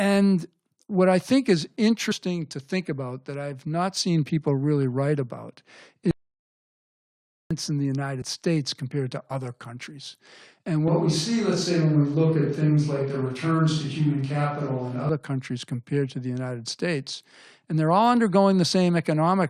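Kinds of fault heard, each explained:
Compressed frames skipped: whole coded frames never reach the output, so the speech jumps forward by about 50 ms at 2.10 s (after "what I think is") and 8.21 s (after "in the"), and about 20 ms at 9.30 s. Each join shows as a small discontinuity in the waveform and a vertical seam on a spectrogram.
Audio dropout to silence: from 6.11 to 7.51 s the signal vanishes for about 1.4 s, likely because the input was lost while the encoder kept writing silence. There is no room tone, so the waveform sits flat and the spectrogram shows a fully black gap.
Switch to a distant microphone: from 10.88 to 15.09 s the speech turns suddenly roomy and hollow with thinner bass, likely because a farther microphone replaced the close one. The level stays roughly the same, and room noise sits about 30 dB below the speech. On a spectrogram this shows as weaker low frequencies, smeared reverberant tails and a raised noise floor, with hard edges where the change begins and where it ends, just before "countries compared to the".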